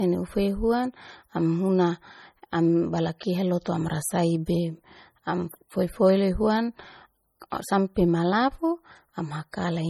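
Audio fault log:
Throughout: low-bitrate audio saved at a high bitrate. The speech keeps coarse MP3 artefacts, likely from a 32 kbit/s encode later re-saved near 320 kbit/s. Nothing sounds above 20.1 kHz.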